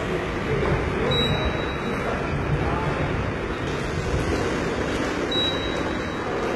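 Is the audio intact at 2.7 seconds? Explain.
No. At 2.7 seconds, as throughout, the treble is rebuilt from copied lower bands and stops near 11.8 kHz, sounding gritty and metallic, likely HE-AAC compression at a bitrate around 16 kbps.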